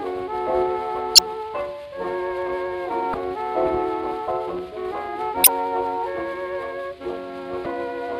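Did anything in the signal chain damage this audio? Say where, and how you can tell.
Yes, at the codec stage: damaged data in a compressed stream. Brief glitches at 1.15–1.19, 3.11–3.15, 5.44–5.48 and 7.63–7.66 s, each about 30–45 ms, mark corrupted bytes. The decoder misreads those frames, loses sync and resumes at the next valid frame header.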